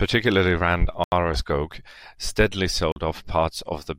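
At 1.04 s the speech drops into a block of digital silence for 80 ms. The sound cuts straight out and comes straight back, leaving a short hole. At 2.92 s it happens again, a 40 ms gap that makes a shorter hole, probably the output buffer not getting filled in time.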